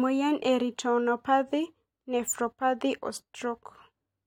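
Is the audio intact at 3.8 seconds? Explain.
Yes, at 3.8 seconds the speech plays through intact, with no audible fault.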